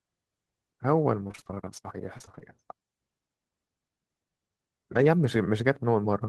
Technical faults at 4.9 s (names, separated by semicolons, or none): none